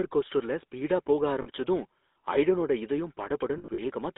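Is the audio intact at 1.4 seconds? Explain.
No. Just after "ஸ்பீடா போக", from 1.42 to 1.47 s, there are lost GSM frames. The decoder held the parameters of the last good frame and repeated them, so the sound turns into a short, rough, metallic ring. The gap is about 40 ms, which fits two lost 20 ms frames. On a spectrogram the harmonic pattern freezes into flat, smeared bands. On the waveform a repetitive stretch stands out against the speech around it.

Around that moment the whole clip also carries plainly audible GSM full-rate codec damage. The codec rebuilds the voice from a vocal-tract model driven by sparse, regularly spaced pulses, which gives it a buzzy, gravelly roughness. The audio sits in a band of roughly 250 Hz to 3.7 kHz, which fits a 13 kbps full-rate link. On a spectrogram there is an empty floor below 250 Hz, nothing above 3.7 kHz, and coarse, grainy harmonics in between.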